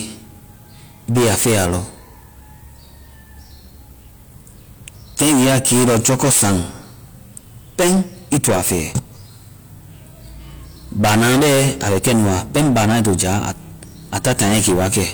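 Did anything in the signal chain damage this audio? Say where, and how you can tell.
Yes: hard clipping, where the speech overran a converter or gain stage by about 19 to 28 dB, so peaks were cut flat. The flat tops add harsh high harmonics, heard as fuzz at 1.10–1.79 s, 4.88–6.62 s, 7.79–8.99 s, 11.00–13.51 s and 14.13–15.07 s.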